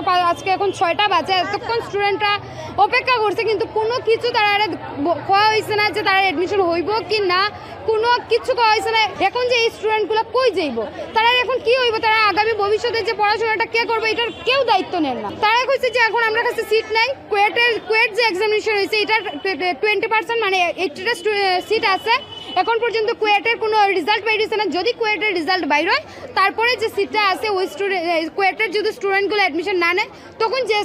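No technical faults can be heard anywhere in this clip.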